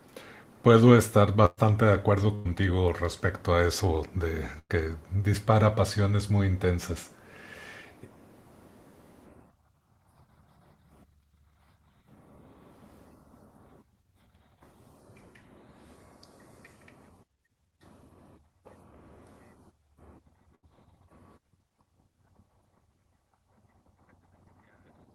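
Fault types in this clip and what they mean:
Burst of packet loss: 80 to 120 ms lost at 1.45, 2.35, 4.59 and 20.55 s; the last sound is held and faded, then audio resumes further on.
Short concealed packet loss: about 20 ms missing from 5.75 to 5.79 s, patched by extending the preceding sound and blending back, heard as a brief smear.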